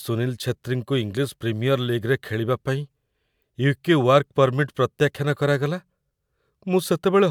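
No technical faults can be heard anywhere in the speech recording. Nothing in the audio points to a problem with how it was captured, processed or delivered.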